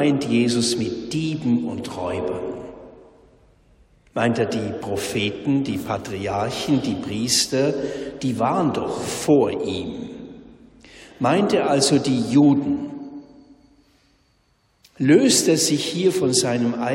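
No technical faults occur at any point in the audio.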